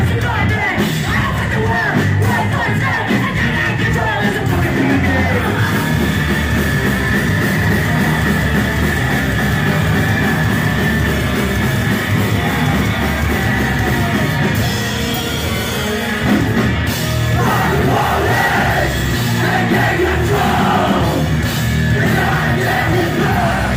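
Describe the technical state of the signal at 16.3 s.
At 16.3 s the signal is intact, with no dropout, distortion, glitch or other technical fault at that point.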